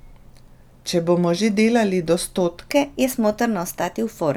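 From 2.71 s to the end at 4.37 s, the speech turns hurried and higher, a section at the wrong speed running 1.15 times fast, about two semitones up, likely from playback on a mismatched clock.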